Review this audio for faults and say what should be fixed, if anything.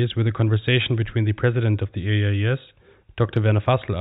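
Nothing here needs fixing. No faults can be heard anywhere in this speech recording.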